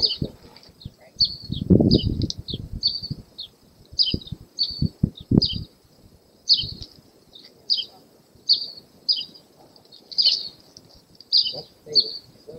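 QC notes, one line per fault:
No fault found.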